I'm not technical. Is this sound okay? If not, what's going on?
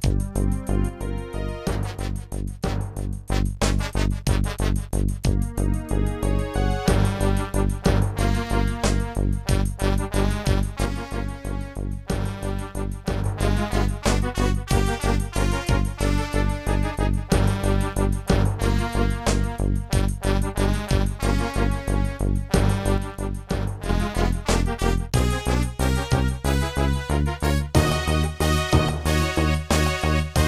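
No. The sound suddenly gets quieter three times: from 0.89 to 3.29 seconds, from 10.86 to 13.26 seconds, and from 22.98 to 23.89 seconds. Each drop is abrupt, and the level jumps back just as suddenly. This is most likely one channel dropping out. A stereo recording has a left and a right side. When one side goes silent and both are combined, everything sounds weaker, and anything only on that side vanishes.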